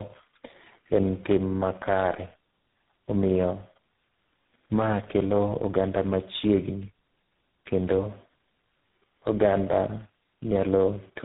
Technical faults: tandem speech coding

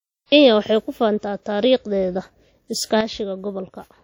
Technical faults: WMA compression; sudden gain jump

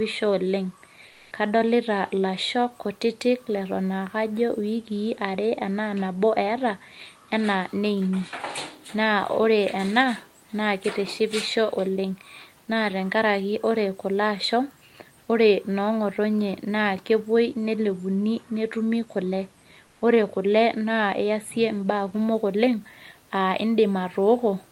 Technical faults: comfort noise in place of the background

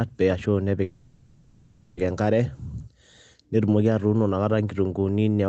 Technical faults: call audio freeze

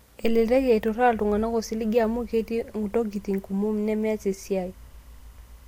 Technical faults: timecode bleed

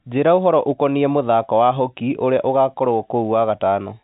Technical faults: none

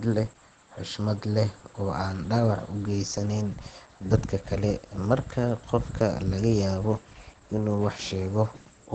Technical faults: Opus compression

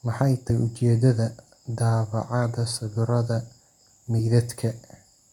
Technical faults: damaged data in a compressed stream

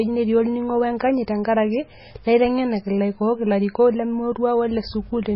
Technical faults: MP3 compression

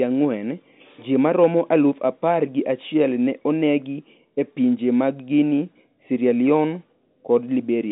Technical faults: none

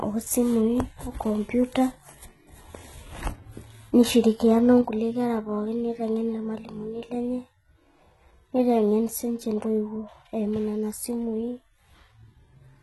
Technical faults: HE-AAC compression; sudden gain jump

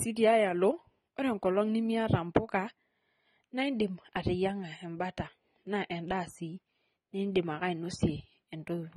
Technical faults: AAC compression

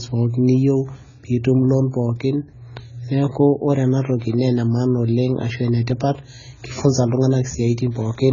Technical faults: AAC compression; clock slip clicks

